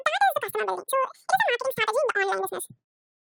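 From start to finish, the speech plays back at double speed and an octave high. This is audio read two samples at a time. The reader took each pair of samples as one frame, likely by mistaking mono for two channels. Everything sounds rushed and chipmunk-like.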